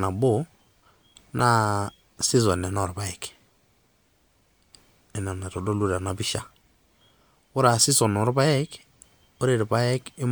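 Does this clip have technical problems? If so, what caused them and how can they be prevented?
Yes. At 1.39 s the speech is interrupted by a brief chirp-like blip, the signature of a corrupt frame decoded. Flipped bits in a couple of compressed frames caused the decoder to misread gain values and spectral codes, so it reconstructed energy in the wrong frequency bands for roughly the duration of those frames. The result is a short, unnatural burst peaking near -15 dBFS. To prevent it, protect the stream with checksums or forward error correction so damaged frames are detected and concealed rather than played.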